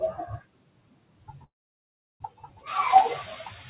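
Speech with a residue of background noise that sinks between phrases and swells under them throughout: these are noise suppressor artifacts, from per-band attenuation of what the suppressor judges to be steady noise. From 0.14 to 2.67 s, parts of the speech sound swallowed and faint, dropping by as much as about 22 dB over roughly a second and a half in total. The same happens again from 3.23 s to the end, by about 18 dB. In both stretches the suppressor took speech for noise and cut it along with the background. Room noise climbs by about 20 dB around 2.5 s. From 1.44 to 2.23 s the audio stalls, fading into a silence of roughly 0.72 s within a 0.76 s gap before carrying on from where it stopped with nothing lost. This call audio freeze is likely the jitter buffer running dry while packets were held up. Nothing reaches above 4 kHz, consistent with a G.711 A-law call path at 64 kbps.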